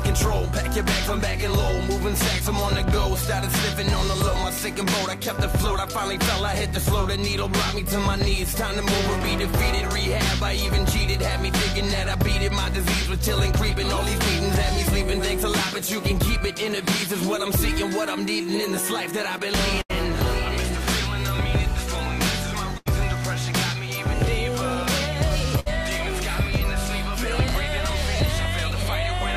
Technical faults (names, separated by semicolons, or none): burst of packet loss